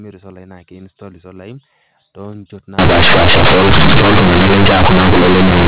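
From 2.79 s to the end, the sound turns into very loud, buzzy distortion with heavy noise filling the pauses. This is companded audio read as linear. The mu-law bytes are being played as plain 8-bit samples without expansion, so every sign change swings across roughly half the output range and quiet passages come out as loud as peaks. Plain clipping only flattens the loudest moments and leaves silences quiet, so the noisy pauses set this fault apart. Before 2.79 s, the G.711 telephone coding sounds normal, with nothing above 4 kHz.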